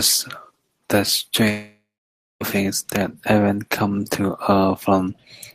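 From 1.49 s to 2.42 s the speech breaks off. The last sound smears into a fading buzz, then 0.57 s of silence, and speech resumes with 0.92 s lost. This is likely a long network dropout. Unlike a brief packet-loss glitch, the concealment runs out into silence.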